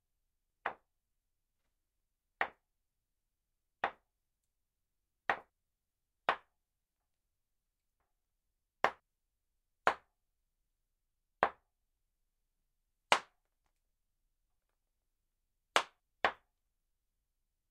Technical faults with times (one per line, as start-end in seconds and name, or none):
0.50-2.00 chunks out of order
5.50-7.00 chunks out of order
8.00-9.00 chunks out of order
14.50-16.00 chunks out of order